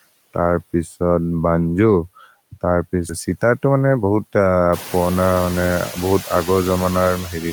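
Speech recording with three system faults. Throughout, a noise suppressor cuts what it judges to be steady noise by about 14 dB frame by frame, leaving a residue that sinks between phrases and swells under the voice; these noise suppressor artifacts are clearest once the room noise itself rises around 4.5 s. At 3.09 to 3.11 s the receiver does a skip ahead, discarding about a second of queued audio with no fill, so playback jumps forward and the two sides butt together almost seamlessly. From 3.35 to 4.04 s a jitter buffer speed-up trims pitch-period slices, roughly a tenth of a second in total, so the voice runs at 112% speed with unchanged pitch and sounds briefly hurried.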